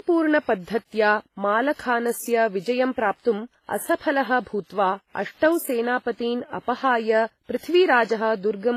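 Speech with transcoding between lossy codecs throughout: doubled artefacts and nothing above 14.9 kHz, a flat spectrogram ceiling, likely from low-bitrate WMA re-encoded to HE-AAC.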